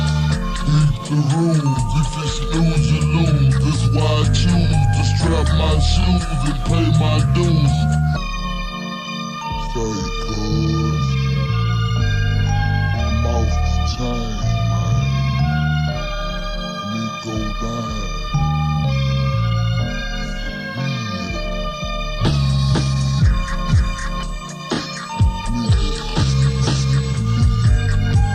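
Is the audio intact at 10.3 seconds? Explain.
No. Computer activity noise runs through the whole clip, including 10.3 s. Shifting processor, graphics or mouse load disturbs the audio circuit's shared ground, adding a faint buzzing chirp that pulses around 150 times a second, roughly 45 dB below the sound, following the computer's activity, not the audio.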